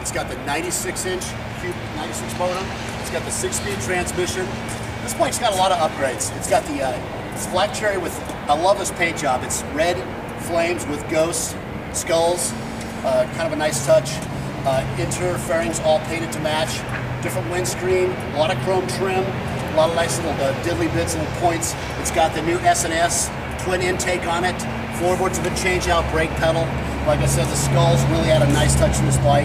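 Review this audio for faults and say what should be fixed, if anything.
Nothing in the recording needs fixing, since no technical faults can be heard anywhere in it. No repair or change to the signal chain is called for.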